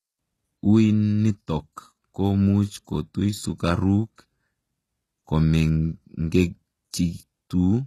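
The speech was likely squeezed through HE-AAC compression at a very low rate, which fits a bitrate around 16 kbps. The encoder kept only the lower spectrum and synthesised the treble by copying lower bands upward under a rough envelope, so the upper harmonics no longer line up with the real ones. Across the whole clip the s sounds come out gritty and metallic or lisping, the damage is plainly audible, and nothing at all remains above 12.3 kHz.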